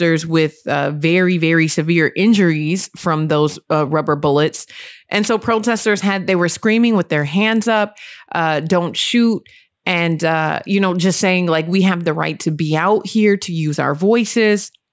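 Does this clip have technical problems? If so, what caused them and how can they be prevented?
Yes, there's aliasing throughout: sibilants sound gritty and metallic, folding back around 8 kHz, roughly 20 dB down, which fits a 48 kHz to 16 kHz downsample without filtering. Run a proper anti-alias low-pass below 8 kHz before resampling.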